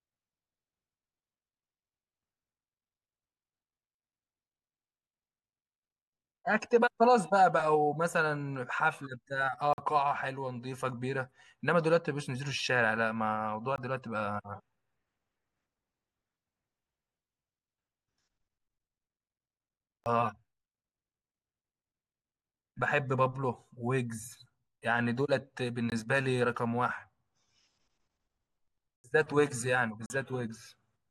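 A speech recording broken by six sudden holes, at 9.73–9.78, 13.76–13.78, 20.04–20.06, 25.90–25.92, 28.96–29.04 and 30.06–30.10 s, lasting 20 to 80 ms: each is a block of digital silence, where samples were zeroed with no fade, typically from an output buffer not filled in time.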